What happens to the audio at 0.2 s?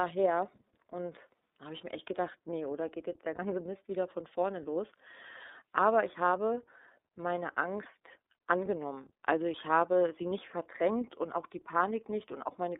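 iLBC codec damage is present at 0.2 s, as it is from start to finish of this speech clip. The codec encodes the excitation of each 30 ms frame on its own, with no help from the frame before, at a rate that fits its 13.33 kbps mode. The line band runs only from about 250 Hz to 3.7 kHz, so the speech sounds thin and narrowband, with a plainly audible rough, synthetic edge.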